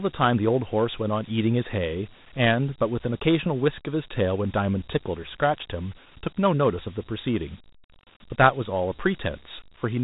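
Throughout the speech, Dialogic VOX ADPCM coding is plainly audible. Each sample is stored as a coarse 4-bit step from the previous one, which fits a 32 kbps OKI ADPCM stream. The quantisation error becomes a gritty hiss that rises and falls with the speech. On a spectrogram, nothing appears above 3.8 kHz, a hard ceiling, and a grainy noise wash fills the gaps between harmonics. On the waveform, the fuzz thickens as the speech gets louder.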